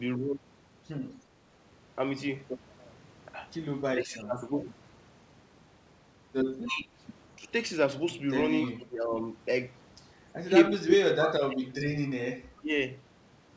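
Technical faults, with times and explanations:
3.9 to 12.7 s, speech suppressed in double talk: the speech dips at 3.93–4.51, 6.66–6.92, 7.37–7.45, 8.68–9.11, 10.44–11.88 and 12.55–12.72 s, by up to about 30 dB in 10.44–11.88 s. The likely cause is an echo canceller that cannot separate the near talker from the far end and turns both down.
6.65 to 8.71 s, echo leak: brief faint copies of the sound arrive 304 ms late, at 6.65–6.69 s (about 20 dB below the speech) and 8.66–8.71 s (about 25 dB below). The likely cause is a loudspeaker echo the far side's canceller failed to remove, which was sent back.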